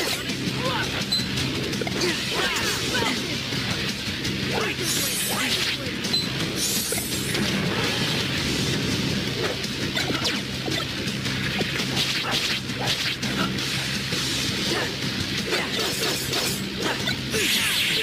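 No technical faults can be heard in this audio.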